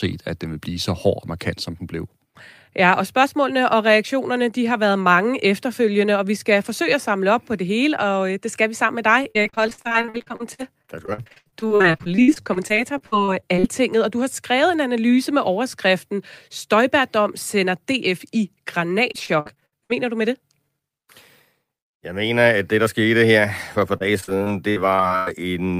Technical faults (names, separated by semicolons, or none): repeated packet loss (robotic sound)